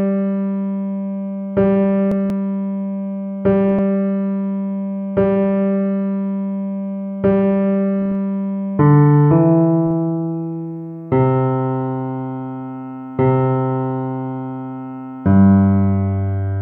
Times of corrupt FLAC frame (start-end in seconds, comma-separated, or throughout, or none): 8.02-8.12, 9.91